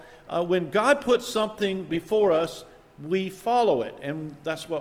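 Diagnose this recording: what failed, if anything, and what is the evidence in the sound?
Call bitrate drop in the codec, 0.95 to 2.63 s. The sound turns coarse and dull, fitting an encoder cut from 128 to 16 kbps.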